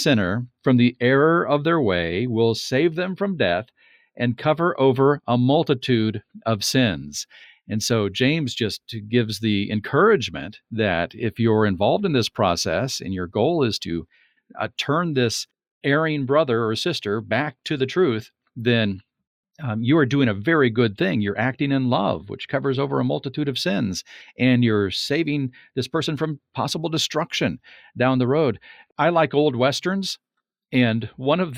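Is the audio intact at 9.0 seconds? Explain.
Yes, at 9.0 seconds the speech plays through cleanly with no dropout, click, distortion or other fault.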